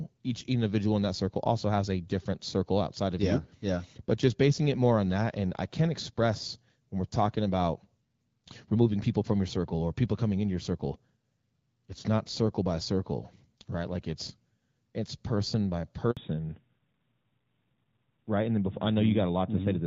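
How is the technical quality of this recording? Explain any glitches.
The speech has two faults that arrive together near the end, both tied to the call changing networks.

At 16.11 s, right after "it's it's person by", the speech cuts out for 60 ms and then resumes. This is a handover gap: while the call switched networks, no speech frames got through, so that sliver of audio is simply missing.

From 16.17 s to the end, the speech sounds duller and more muffled, with a rougher edge. This is a fallback to narrowband. After the switch, nothing is left above 4 kHz. That fits the call dropping from AMR-WB HD Voice, which sounds clear and airy with only light coding roughness beforehand, to the older AMR-NB codec at around 12.2 kbit/s.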